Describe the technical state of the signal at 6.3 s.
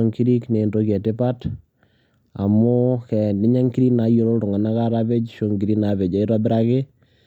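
At 6.3 s the speech signal is intact, with no dropout, distortion or other fault at that moment.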